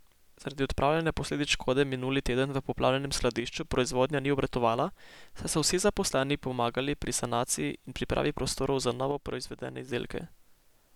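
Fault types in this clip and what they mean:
One channel drops out: The speech level falls abruptly by about 6 dB from 3.4 to 3.65 s and again from 9.11 to 9.88 s, and snaps back. This likely comes from one stereo channel going silent, halving what both sides shared once summed to mono.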